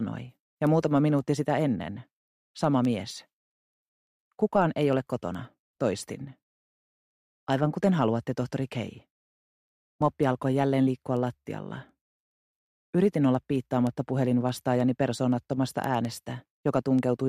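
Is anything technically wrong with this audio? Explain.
Yes. From 0.15 s to 17.19 s, sharp ticks of uneven strength repeat about ten times a second. These are word clock ticks: the receiver's clock is unlocked and off by roughly 200 ppm, so one sample is dropped or repeated at each slip.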